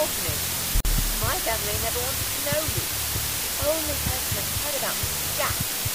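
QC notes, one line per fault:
throughout: low bit depth with dither. The audio is carried on only about 3 bits, and dither was added before each sample was rounded, so the rounding error no longer tracks the signal and comes out as plain white noise instead of distortion. With so few levels that hiss sits roughly level with the wanted sound. It is heard as a constant, even wash of noise across the whole clip, with no grit or harmonic buzz riding on the louder passages.
0.12 s to 5.66 s: periodic USB or driver dropouts. Every 0.25 s a short slice of audio, around a millisecond, is lost and replaced by silence, some twenty times in all. The strict spacing suggests a background task likely stalling the USB bus or audio driver on a fixed timer. Each missing slice cuts the waveform abruptly, so it is heard as a regular tick or small pop, present only where there is sound to interrupt.
0.80 s to 0.85 s: gap at a join of encoded pieces. 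A gap of about 46 ms opens in otherwise continuous sound, and then the sound resumes from where it stopped, with nothing skipped. This fits two separately encoded pieces butted together untrimmed, so the encoder's start-up delay and the last frame's padding both remain at the seam. The gap's edges are smeared by the codec, and it reads as a brief hole rather than a click.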